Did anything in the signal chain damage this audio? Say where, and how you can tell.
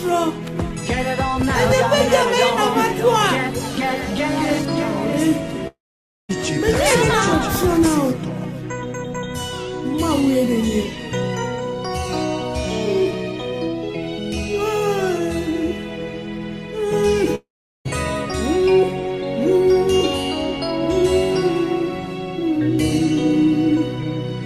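Yes, likely a long network dropout: at 5.67–6.31 s and 17.35–17.87 s, the receiver stretches the last sound into a fading buzz, goes silent, then resumes with a chunk gone.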